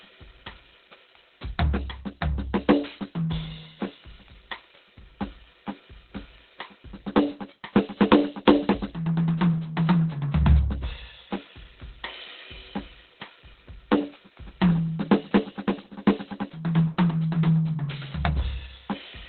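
A music clip with heavy Opus compression damage from start to finish. Nothing survives above about 4.2 kHz, so the whole mix sounds boxed-in, muffled and hoarse, as if squeezed through a telephone line. That narrowband, throaty character, rather than the watery swirl of a low-rate MP3, points to the encoder having dropped into its speech-oriented SILK mode, likely at a very low bitrate around 12 kbps.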